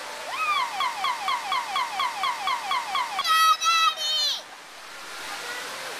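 From 0.80 to 3.21 s a broken-record loop repeats one 0.24 s fragment ten times back to back, likely because playback stalled and kept resending its last buffer, losing the audio meant for that span. Waveform and spectrogram show identical blocks at a 0.24 s period.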